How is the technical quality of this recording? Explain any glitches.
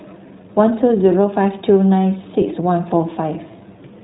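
The recording has one fault across its full length: clearly audible iLBC codec damage. Throughout, iLBC coding removes everything above 3.8 kHz and encodes each short frame independently, consistent with 20 ms frames at about 15 kbps, leaving the speech muffled, slightly rough and synthetic.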